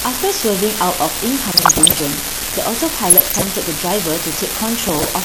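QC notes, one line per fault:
throughout, unreliable data bit: a steady crackling fizz runs under the speech and through the pauses, from one marginal data line flipping at random and adding equal-sized spikes.
throughout, MP2 compression: the speech sounds dull and gurgly, with granular distortion and flickering highs, likely from MPEG Layer II dropping upper sub-bands at a rate fitting about 80 kbps.
1.48–2.0 s, 3.1–3.51 s, 4.83–5.05 s, DAB burbling: short noise blips in single sub-bands appear over the speech as bit errors, under one percent, slip past error correction.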